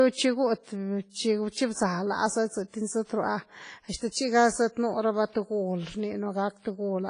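From the start the speech carries a washy, ringing quality, with a hiss that swells and fades along with the voice, and the top end is dull. This points to WMA compression, likely at a low bitrate near 24 kbps. The transform coder spreads its quantisation noise across long blocks and discards weak components, so damage is heavy. A spectrogram shows a hard ceiling with nothing above 10.3 kHz, and fine harmonic detail broken into patchy, smeared blotches.

At 3.96 s a pre-echo appears. A short hiss runs for about 51 ms, until 4.01 s, ahead of a sharp attack, which itself sounds blunted. The attack landed late in a coding block, so noise sized for the loud onset was spread back over the quiet moment before it. On the waveform a low, fuzzy band rises before the transient. A spectrogram shows a broadband smear leading into the onset.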